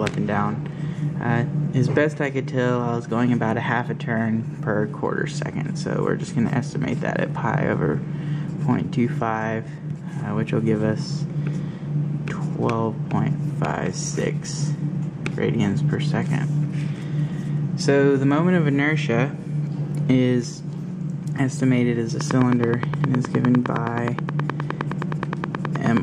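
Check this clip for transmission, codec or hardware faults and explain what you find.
One fault turns up, near the end. From 22.21 to 25.98 s, a train of clicks ticks evenly at about 9.6 per second: around forty sharp pops, roughly 15 dB above the sound. The likely cause is interference or a faulty connection or power supply injecting repeated pulses.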